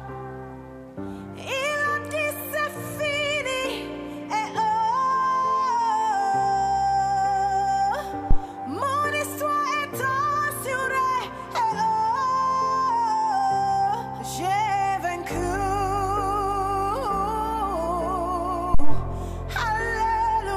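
A supply being switched on a live input, the phantom power thump, sends a voltage step through the coupling capacitors twice: at 8.31 to 8.39 s and 18.74 to 19.07 s. Each is a deep thump peaking around -6 dBFS, decaying over 19 ms and 72 ms respectively.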